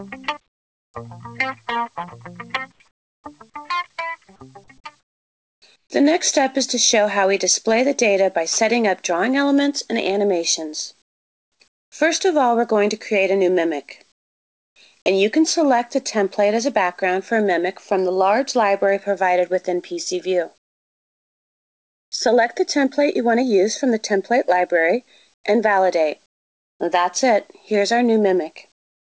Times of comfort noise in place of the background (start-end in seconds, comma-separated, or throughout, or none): 0.48-0.94, 2.72-3.24, 5.00-5.90, 11.02-11.92, 14.12-14.76, 20.58-22.12, 25.34-26.80, 28.72-29.05